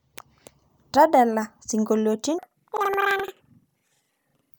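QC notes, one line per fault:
2.39–4.59 s, planar audio read as interleaved: speech jumps an octave high with an 11.7 Hz flutter, as each 85.33 ms block, which fits a 4096-sample layout, plays twice at double speed. A spectrogram shows harmonics doubled and chopped at the block edges.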